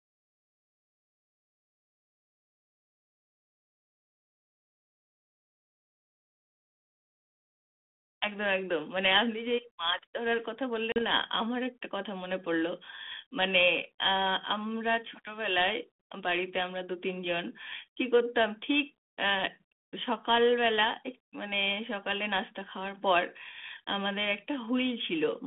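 At 10.92 s there's a packet loss on an ADPCM call: a 40 ms hard-edged silent gap, roughly two packets. The decoder's predictor loses sync, so the speech comes back slightly distorted until it settles, by about 11.02 s.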